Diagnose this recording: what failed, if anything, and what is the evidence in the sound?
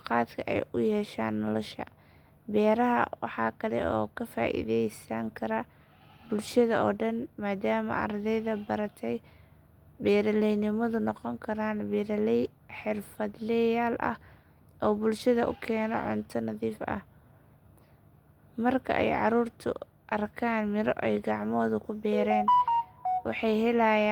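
Nothing failed; no faults detected.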